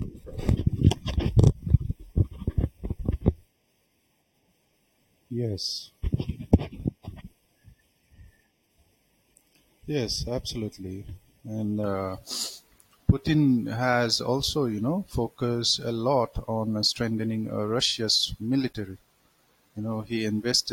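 From 0 to 11.84 s, channel delay causes comb filtering: one channel lags by under half a millisecond, so the mono sum notches from about 1.5 kHz upward, sounding hollow.

At 7.2 s, a compressed frame is skipped: roughly 20 ms of speech drops out, matching one 23.2 ms frame.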